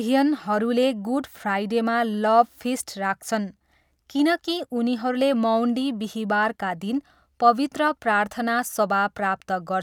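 No faults detected in this speech recording; nothing in the signal chain calls for attention.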